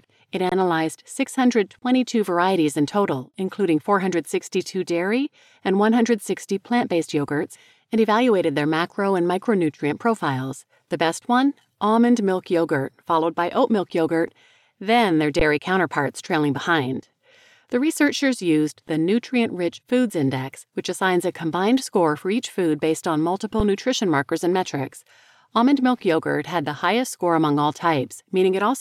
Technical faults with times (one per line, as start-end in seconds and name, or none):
0.49-0.52 underrun with held sample
15.39 underrun with held sample
23.60 underrun with held sample